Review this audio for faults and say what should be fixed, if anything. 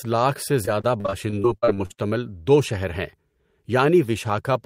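Repeated packet loss (robotic sound) runs from 0.65 s to 2.00 s, right after "لاکھ سے". Over that stretch the speech turns choppy, with roughly a dozen short dropouts, the longest about 45 ms. Each gap is papered over by extending the preceding sound, so about a quarter of the span is synthetic fill rather than real audio, which gives the robotic texture. A larger adaptive jitter buffer, forward error correction or a more stable network path would prevent it.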